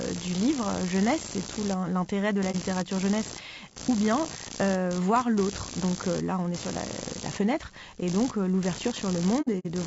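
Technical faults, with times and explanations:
Throughout: computer activity noise, a buzz pulsing around 70 Hz at about -15 dB below the speech, following computer load through shared ground; spectrogram shows regular vertical striations.
Throughout: low-delay AAC compression, likely AAC-ELD near 32 kbps; short frames smear harmonics, so speech sounds grainy, with noise filling gaps between harmonic lines.
2.51–2.55 s: AAC frame loss with muting between "tout l'intérêt de la" and "littérature jeunesse ou bien"; 30 ms of zeroed spectrum shows as a soft-edged waveform dip.
9.41–9.66 s: AAC frame loss with muting, 120 ms lost over 240 ms, which fits about four frames; longest gap around 70 ms, seen as blank spectrogram columns.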